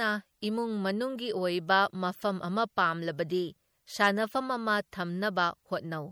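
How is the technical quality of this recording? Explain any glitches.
The recording has plainly audible coding damage from start to finish, likely MP3 compression at a low bitrate, and what can be heard fits roughly 64 kbps. The encoder works in short frames and, when bits run short, drops the weaker frequency components, which then flicker in and out between frames. In this speech that gives a watery, swirling texture with metallic chirps on s sounds and softened attacks. Simple low-pass filtering would only dull the sound, without this frame-to-frame warbling.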